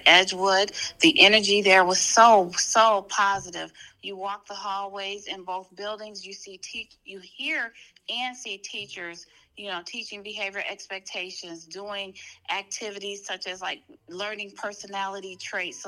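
From 2.44 to 3.89 s the level falls by roughly 15 dB in coarse, unsmoothed steps, around a hundred a second, producing zipper noise: a fine ticking buzz riding the fade. A waveform shows a staircase envelope, and a spectrogram shows faint, evenly spaced vertical lines.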